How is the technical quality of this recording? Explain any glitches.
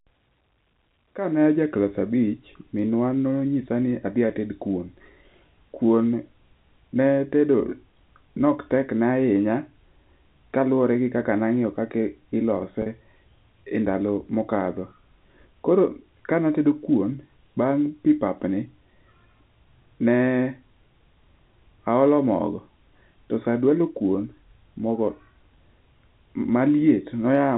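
The recording has one brief glitch on a telephone-band line. Packet loss with pitch repetition at 12.82 to 12.86 s: about 40 ms went missing, which fits two 20 ms packets, and the receiver filled it by repeating the last pitch period, so the sound briefly holds with a slight buzz. The G.711 telephone coding cuts everything above 4 kHz.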